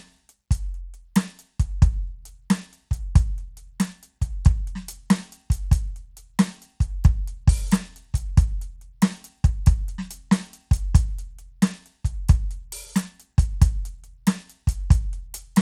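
Bluetooth SBC compression runs through the whole of this music clip, with plainly audible damage from start to finish. The treble thins out and flickers, and a gritty, grainy layer with aliasing sits on top of the music. That points to a starved bit pool, likely an SBC link running at a low rate, one that fits about 96 kbps, where the upper sub-bands get few or no bits and the remaining bands are coarsely quantised.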